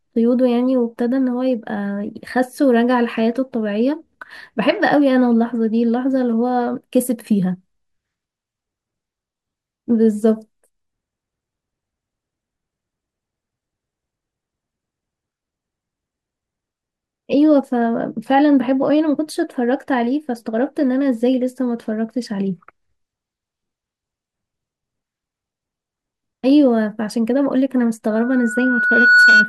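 Right at the end, from 28.10 s to 29.49 s, there's a loudspeaker feedback squeal. The mic is hearing its own speaker, and the loop runs away at 1.5 kHz. That tone swells over roughly a second until it sits about 10 dB above the speech.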